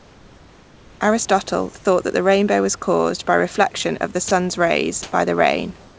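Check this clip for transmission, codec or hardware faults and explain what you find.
Two faults stand out, both likely from discontinuous transmission on a call path whose G.722 coding leaves nothing above 8 kHz.

Comfort noise in place of the background appears from 0.0 to 1.01 s, 5.03 to 5.12 s and 5.81 to 5.99 s. The sender likely stopped transmitting during pauses, so the receiver synthesised a smooth, featureless hiss. That hiss is about 3 dB quieter, about 7 dB louder and about 2 dB quieter respectively than the real room noise, which sits about 29 dB below the speech. Unlike ordinary room noise, these stretches lose the background's detail and step in level.

Sound dropped by the voice detector occurs from 4.28 to 4.31 s, just after "by reflection of the". For 30 ms, the sound is swapped for comfort noise. Unlike a network dropout, which produces a click or gap, this substitution sounds smooth.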